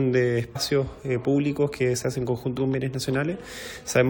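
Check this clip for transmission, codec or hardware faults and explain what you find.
Two spots where compressed frames were skipped, at 0.55 s and 2.57 s. The decoder drops whole frames, jumping ahead roughly a tenth of a second, then around 50 ms.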